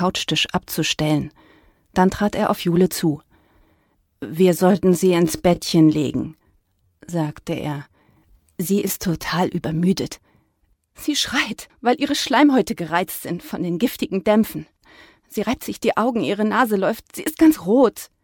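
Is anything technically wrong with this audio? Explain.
Yes. From 4.47 s to 9.29 s the sound abruptly slows to about 0.74 times its pace while its pitch stays put, so it drags. This is a time-stretched section, likely from software lengthening the passage by repeating short slices to hold pitch.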